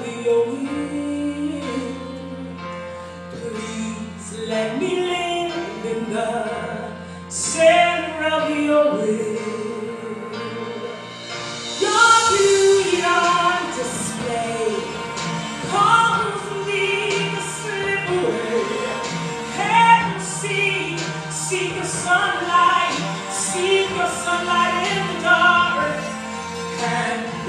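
Nothing in this audio stands out as a technical fault at any point, so there's nothing to flag here.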